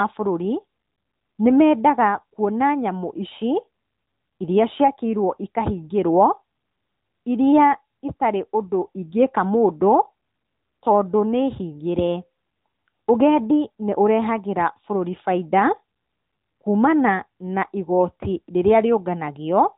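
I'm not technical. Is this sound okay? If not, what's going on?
No. The AMR narrowband mobile codec, the speech compression used on older 2G and 3G phone calls, affects the whole clip from start to finish. Nothing above about 3.8 kHz gets through, which fits the low sampling rate of a phone line, so the speech sounds thin and muffled. The codec rebuilds the voice from a simple model of the mouth and throat rather than keeping the actual sound, which leaves a plainly audible processed, artificial quality.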